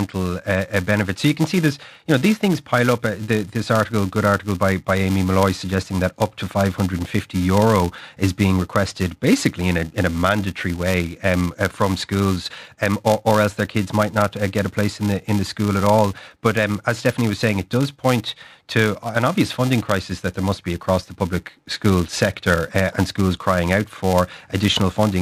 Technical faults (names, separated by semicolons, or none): filter restarted on every block